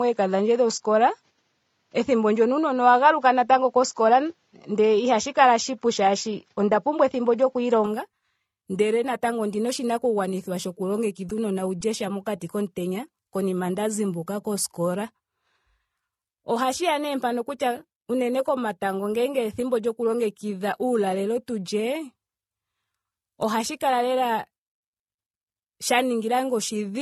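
For the first 7.86 s the speech sounds dull and boxy, with nothing above 7.6 kHz, a slightly different level and a faint extra noise floor. That's likely an input switched to a poorer device, and it clears up abruptly at 7.86 s with no gap. Throughout, you can hear mixed codec smear and nothing above 12.8 kHz, which points to transcoding between lossy codecs, likely a low-rate AAC pass followed by MP3.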